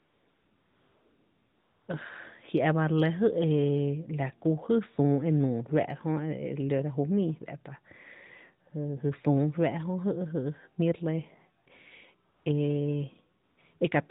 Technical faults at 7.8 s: none

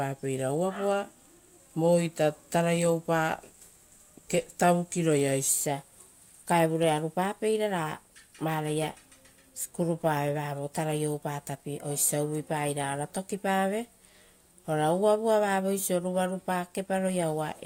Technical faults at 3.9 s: none

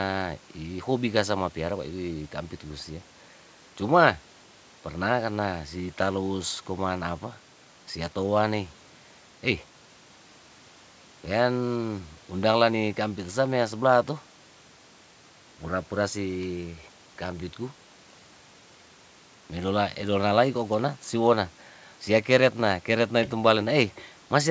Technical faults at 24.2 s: none

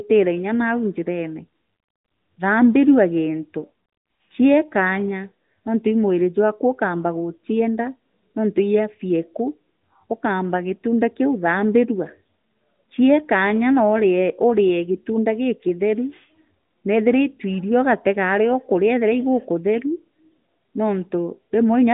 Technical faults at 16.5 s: none

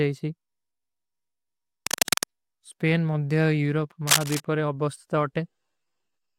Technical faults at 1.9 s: cable scratch noise

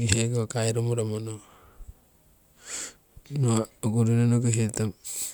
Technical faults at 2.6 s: none

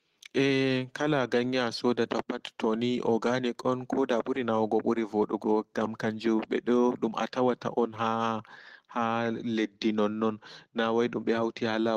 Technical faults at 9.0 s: none

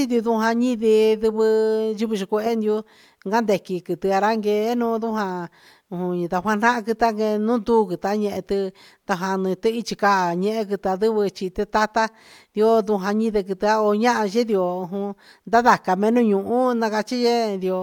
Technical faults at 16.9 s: none

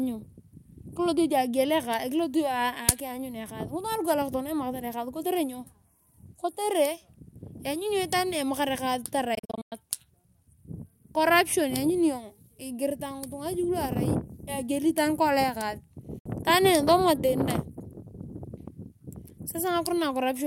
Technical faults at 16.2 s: Bluetooth dropout

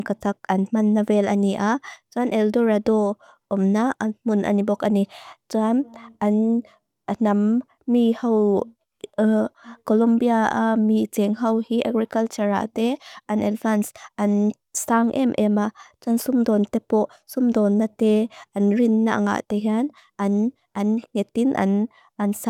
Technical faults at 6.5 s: none

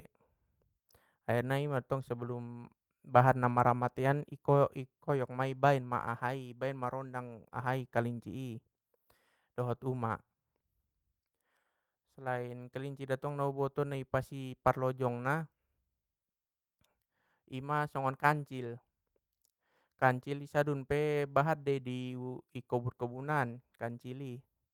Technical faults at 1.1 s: none

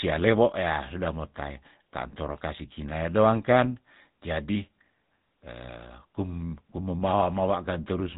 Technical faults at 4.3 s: GSM full-rate codec

